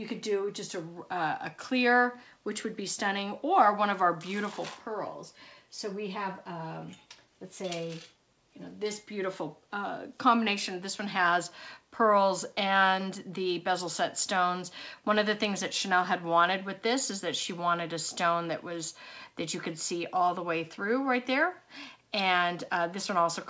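No technical faults are audible.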